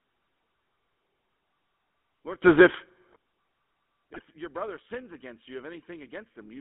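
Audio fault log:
Throughout, GSM full-rate codec: The speech passes through a vocal-tract model driven by a sparse, regularly spaced pulse excitation, at a rate consistent with 13 kbps. This gives a plainly audible buzzy, gravelly roughness, and the band is confined to roughly 150 Hz to 3.5 kHz, so the speech sounds thin and narrow.
2.42 to 3.16 s, sudden gain jump: The level leaps by about 23 dB in a single step and falls back at 3.16 s, likely a digital gain setting applied with no ramp. The speech and the background noise jump together, so the whole passage abruptly becomes far louder.
4.14 to 4.22 s, GSM bit errors: Corrupted bits on a weak radio link reached the speech decoder, garbling the filter, pitch and gain values for a span consistent with about four codec frames. The speech breaks into a brief burst of squawking, popping and gargling.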